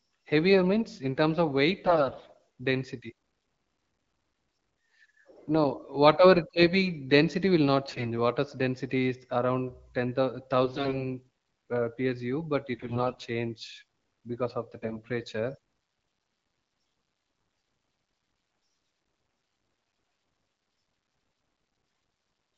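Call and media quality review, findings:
AMR bit errors. Hoarse, scratchy, gargly bursts at 1.84–2.38 s, 7.87–8.06 s, 10.64–10.98 s, 12.74–13.26 s, 14.82–15.07 s and 18.61–18.77 s. Pitch and level hold. Corrupted low-priority frame bits misplace excitation pulses and skew fine pitch, gain and spectral values. Worst at 7.87 and 18.61 s, where errors run densest. The underlying AMR-WB path sounds clean and wideband, consistent with a rate around 12.65 kbit/s.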